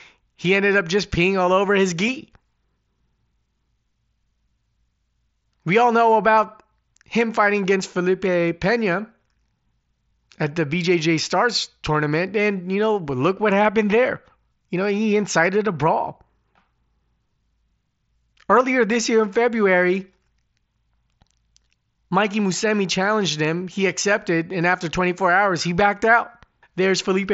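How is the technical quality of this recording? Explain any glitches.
The recording passes through a wideband Bluetooth headset link with sound up to 8 kHz, and it has four tiny concealed glitches.

Concealed Bluetooth headset packet loss occurs at 2.07 s after "peeing all over his", at 6.36 s after "all know", at 23.44 s, and at 24.72 s after "accepted and". Each gap lasts 7.5 ms, except 15 ms at 6.36 s. The receiver patches each one with a copied stretch of the preceding waveform, leaving the single losses nearly hidden. A plain dropout would leave a silent hole or a click.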